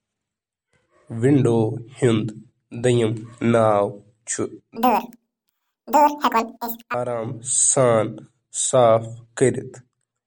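MP3 compression runs through the whole speech clip. The damage is plainly audible. The sibilants have a watery, swirling edge and consonant attacks smear, as weak frequency components drop in and out from frame to frame. This is likely a starved MP3 encoder, and the heaviness of the artefacts points to a bitrate around 48 kbps.

From 4.76 to 6.94 s comes a section at the wrong speed. The speech runs at 1.99 times its proper rate, so it is hurried and chipmunk-like, and pitch rises with it by roughly ten semitones, jumping up at the start and dropping back at the end. Speed and pitch move together because the samples are simply played out faster, likely from the section being read against the wrong clock.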